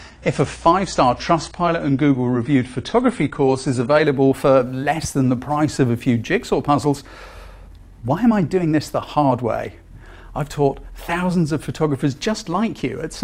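For the first 4.0 s the sound is dull and smeary, with nothing above 10.1 kHz and stronger codec artefacts, then it brightens abruptly with no gap. This is an adaptive stream starting at a low bitrate, which points to roughly 32 kbit/s AAC before the player stepped up to about 96 kbit/s.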